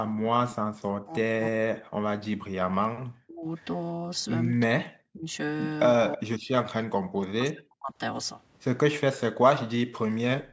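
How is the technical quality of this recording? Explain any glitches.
The recording has clear echo-canceller problems: repeated speech suppression, one brief echo leak and a short background dropout at the end. The band stops at 8 kHz, consistent with normal call microphone processing.

Speech suppressed in double talk occurs at 1.04–1.73 s, 2.25–3.46 s, 4.66–5.29 s and 5.99–7.99 s. The voice dips by up to about 40 dB in patches, likely because the canceller confused the talker with far-end echo while both sides spoke and attenuated everything.

An echo leak appears at 6.12–6.17 s. A faint delayed copy of the voice, trailing by 324 ms and roughly 20 dB below the direct speech, slips through. This is likely residual loudspeaker pickup that the canceller failed to remove.

Background gated by the echo canceller occurs at 10.45–10.52 s, in the final moments. The room sound drops by about 16 dB for roughly 70 ms as the canceller clamps the microphone during loudspeaker playback, and the clip ends before it recovers.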